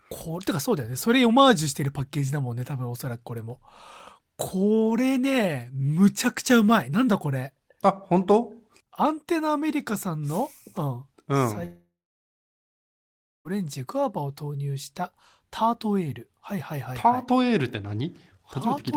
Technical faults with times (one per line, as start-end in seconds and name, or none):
11.65-13.48 long network dropout